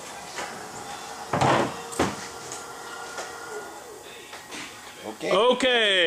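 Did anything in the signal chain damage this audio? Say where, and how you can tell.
No, nothing in the chain damaged this audio.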